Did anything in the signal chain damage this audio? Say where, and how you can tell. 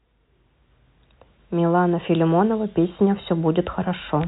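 No, nothing in this speech stood out on listening as damage from any stage of the signal chain.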